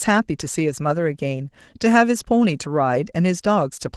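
Opus voice compression runs throughout. The speech sounds hoarse and slightly robotic, plainly damaged by coarse excitation coding that fits a low bitrate near 16 kbps.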